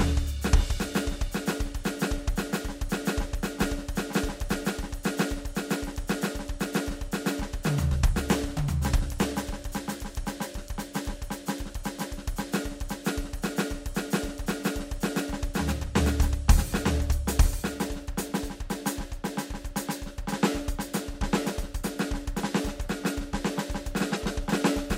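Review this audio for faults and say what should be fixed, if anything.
The music carries a full second copy of itself running about a second behind, at roughly the same loudness as the original, from start to finish. Every phrase is repeated as a crisp, undecayed echo with no room colour. That points to a doubled audio track, likely from the signal being captured twice, once through a slower path, or from an edit that left two copies stacked out of alignment. Fix it by removing the delayed copy, and prevent it by routing each source through a single capture path and checking edit timelines for duplicated regions before export.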